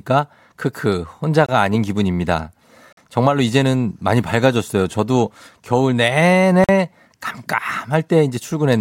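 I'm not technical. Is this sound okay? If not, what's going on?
No. The speech drops out three times for a split second. Each is a block of digital silence: a stretch of audio replaced by silence, switching off and back on instantly. The first, at 1.46 s, lasts about 23 ms. The ones at 2.93 s and 6.64 s last about 46 ms, long enough to hear as a little hole. Those lengths fit whole chunks of 1,024 and 2,048 samples going missing.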